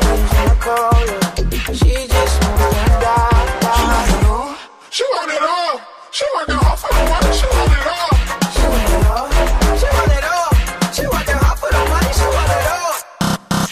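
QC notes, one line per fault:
Nothing to flag here; the audio holds steady all the way along with no glitches or trouble spots to note.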